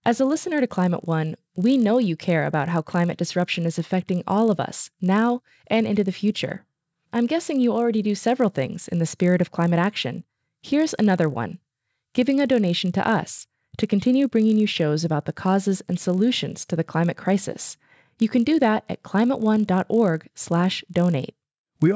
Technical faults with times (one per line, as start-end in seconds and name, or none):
0.00-21.96 resampler restarted on every block